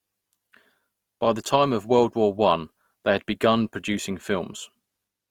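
Throughout, the speech carries the artefacts of a heavily compressed source. The fault is low-bitrate audio saved at a high bitrate. The sound fits a 24 kbit/s Opus encode, likely re-saved as 192 kbit/s MP3. The bigger file restores nothing already lost.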